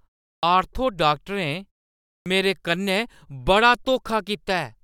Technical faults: clipped start after a pause

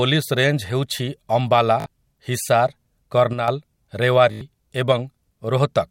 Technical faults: Bluetooth stutter; one channel drops out

